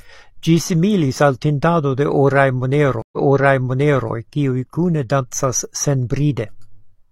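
A stream reconnect interrupts this speech recording at 3.02 s: the connection dropped after "al tintado de oraj", the player went quiet, re-established the link and started a new decoder partway through the stream. The result is a gap of silence of about 0.1 s. When sound returns with "kiuj kune dancas", playback has jumped back by nearly a second (0.98 s), so material heard just before the break repeats. The disturbance ends at 4.10 s.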